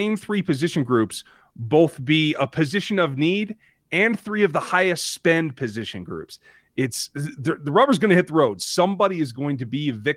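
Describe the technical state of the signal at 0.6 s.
At 0.6 s the speech is inside a run of repeated timing corrections lasting from 0.04 to 9.81 s. They come from clock drift between sender and receiver: the sender's clock runs roughly 1.5% slow, so the receiver's jitter buffer keeps draining.

To stay in step, the receiver stretches the stream by repeating short pieces. The result plays at about 99% speed and gains roughly 150 ms overall. This is heard, if at all, as slight hiccups and a slightly unsteady, dragging tempo. Unlike packet loss, these edits never leave garbled fill. They are small, unevenly spaced, and always lengthen the sound, never shorten it.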